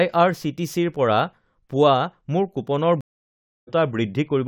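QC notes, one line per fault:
3.01–3.69 s, stream reconnect: the connection dropped and playback restarted on a fresh decoder mid-stream, leaving about 0.66 s of silence, after which the speech resumes roughly 0.3 s further on. On the waveform this is a flat gap; on the spectrogram, an empty vertical band.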